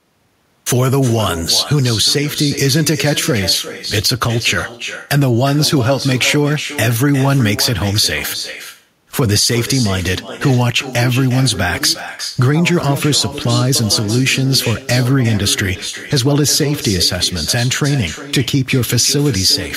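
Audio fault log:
Throughout, echo with no canceller: each phrase returns roughly 0.4 s later, about 12 dB quieter and thinner, from a far-end loudspeaker feeding its microphone.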